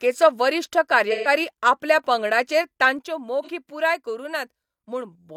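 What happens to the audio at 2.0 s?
Nothing goes wrong at 2.0 s: the speech carries straight through that point with no dropout, click, distortion or other fault.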